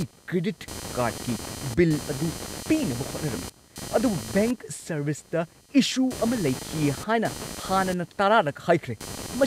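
Speech recording with computer activity noise running the whole way through, a buzzy, scratchy pulsing at around 200 Hz that sits maybe 15 dB under the voice. It rises and falls on its own schedule rather than following the talking, which gives it away. What's happening is the processor, graphics card or mouse drawing varying current, and those load swings ride into the audio circuit through the shared ground.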